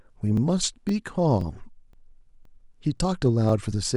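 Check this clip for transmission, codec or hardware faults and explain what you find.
Overlapping chunks occur at 0.37–0.39, 0.89–0.91, 1.41–1.43, 1.93–1.95, 2.45–2.47, 2.97–2.99 and 3.49–3.51 s. The speech was handled in 0.5 s chunks. Each chunk restarts 20 ms early, so that slice plays twice. The result is a regular stutter or click.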